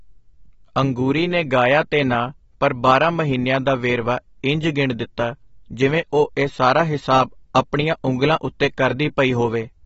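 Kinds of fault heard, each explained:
AAC compression: The speech is plainly dulled and smeared, with nothing above 7.7 kHz, likely from AAC-LC coding at a low bitrate near 28 kbps. A spectrogram shows a flat ceiling at 7.7 kHz.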